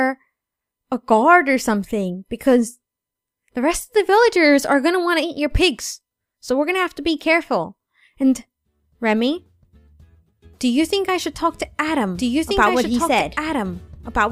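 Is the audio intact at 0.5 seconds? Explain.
Yes, the audio at 0.5 seconds is intact, with no dropout, click, distortion or other fault at that moment.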